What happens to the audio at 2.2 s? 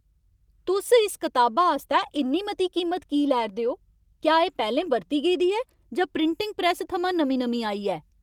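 Just before 2.2 s, from 1.91 to 2.17 s, a lost packet is rebuilt from error correction: about 140 ms plays from low-bitrate backup copies, sounding rough and noisy, with no silent gap.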